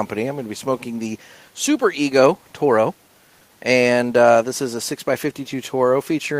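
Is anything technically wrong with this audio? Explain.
No, nothing technically wrong can be heard here.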